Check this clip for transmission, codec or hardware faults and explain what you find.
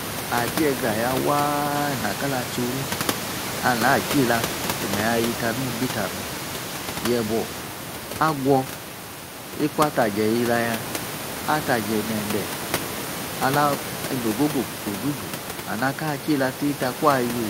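No transmission, codec or hardware faults turn up in this clip, and the room noise about 8 dB below the speech belongs to the recording rather than the system.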